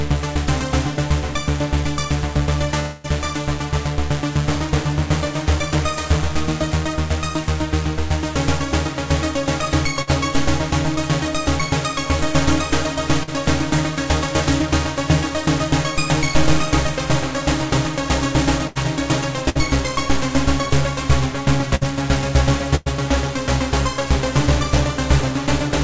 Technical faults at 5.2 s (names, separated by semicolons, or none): none